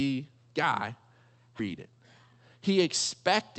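At 1.59 to 1.61 s a skip ahead drops roughly 0.7 s of speech and splices the two sides directly. On a spectrogram, formant tracks break abruptly with no silent gap between them.

From 1.69 to 3.58 s, a jitter buffer speed-up trims short pitch-period pieces repeatedly, removing about 0.3 s. Speech runs at 117% pace but keeps its pitch, so it sounds hurried. A spectrogram shows syllables packed closer together while the harmonic spacing stays unchanged. Throughout, energy stops near 8 kHz, as expected from the Opus call path.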